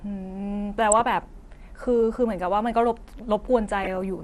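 The whole speech clip has a dull, granular edge with a plainly audible gurgle, most likely MP2 compression at a rate that fits about 80 kbps. At that budget the encoder can't feed all 32 sub-bands, so upper bands drop out or flicker and the rest get coarsely quantised. That's why the top end sounds muffled and the speech has that grainy, digital-radio texture running through it.

From 0.92 to 1.25 s there's a burst of DAB burbling, and again from 3.78 to 4.02 s. That's bit errors slipping through the error correction into the MP2 stream. Corrupted samples put short blips of noise into single sub-bands, and corrupted scale factors make sub-bands jump in level for up to a frame. The second burst sounds a bit rougher, which fits a somewhat higher error rate, roughly double.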